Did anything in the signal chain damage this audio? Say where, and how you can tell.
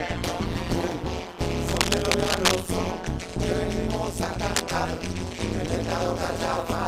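Yes. Frame-based processing rebuilt the audio with overlap-add ripple: mismatched window overlap swings the level by about 60 dB roughly 150 times a second, a metallic buzz throughout.

Cable scratch noise, likely from a worn analogue cable or connector, adds dense, uneven scratching roughly as loud as the sound itself from 1.68 to 2.64 s and 4.54 to 4.76 s.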